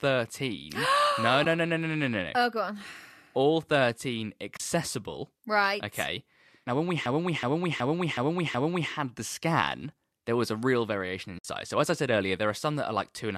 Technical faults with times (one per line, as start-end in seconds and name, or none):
1.45 AAC frame loss with muting
4.57-4.60 AAC frame loss with muting
7.06-8.92 system hang loop
11.38-11.45 AAC frame loss with muting